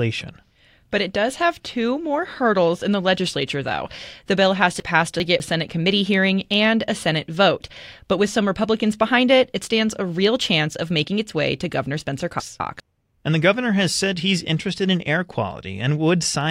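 At 4.8 s and again at 12.4 s, the speech turns briefly jumbled: chunks out of order, 200 ms blocks played late, unlike dropouts, nothing is missing.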